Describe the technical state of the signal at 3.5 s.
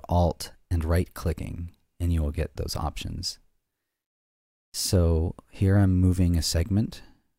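At 3.5 s the signal is intact, with no technical fault present at that moment.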